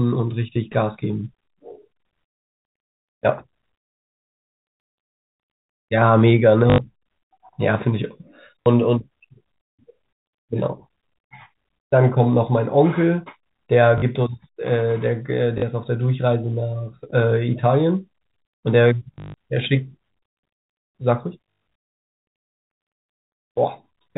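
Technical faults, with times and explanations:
6.70–6.78, 8.63–8.66, 13.98–14.02, 15.58–15.62, 19.14–19.34 and 21.44–21.76: packet loss with last packet repeated. Audio went missing for 80 ms, 40 ms three times, then 180 ms scattered over 200 ms and 220 ms over 320 ms, and the receiver replayed the last good block each time. The steps fit 20 ms packets, so the copies restart out of step with the pitch. The longer runs (140 ms and 120 ms) buzz robotically at 50 Hz. A waveform shows one short segment tiled repeatedly. A spectrogram shows a frozen, combed spectrum, all below the telephone band's 4 kHz ceiling.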